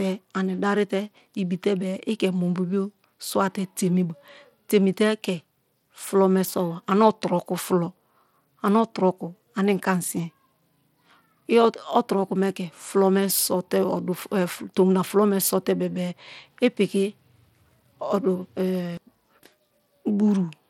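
Throughout the speech there is plainly audible codec damage, likely from Bluetooth SBC compression at a low setting, which fits about 96 kbps. Starved upper sub-bands leave nothing above 17.4 kHz, with treble flickering and coarse quantisation adding gritty noise and aliasing.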